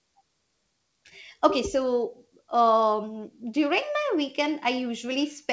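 No technical faults are audible.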